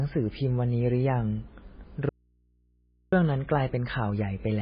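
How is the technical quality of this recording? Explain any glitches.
Technical quality is poor, with heavy codec damage throughout and one clear break in the sound.

Across the whole speech clip the treble stops abruptly at 5 kHz, and the voice has a watery, swirling character with smeared consonant onsets. This is likely MP3 compression at a very low bitrate, around 16 kbps. Starved of bits, the encoder discards everything above a fixed cutoff and keeps switching quieter frequency components on and off from frame to frame. On a spectrogram this shows as a hard ceiling at 5 kHz with patchy, flickering blocks of energy below it.

From 2.09 s to 3.12 s the speech cuts out abruptly for about 1.03 s, and only a low mains hum remains, roughly 40 dB below the speech level. This is an audio dropout to a faint residue, likely caused by the signal feed being lost while the recording path stayed live and kept picking up hum from the open input. 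In the waveform the amplitude drops sharply to a thin, steady band with no fade. On a spectrogram the gap is dark apart from narrow horizontal lines at the hum frequency and its harmonics.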